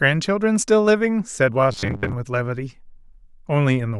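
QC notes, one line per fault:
1.72–2.13 s robotic sound from repeated short buffers: speech turns to a rigid 100 Hz metallic buzz, likely from a roughly 10 ms block replayed through most of it.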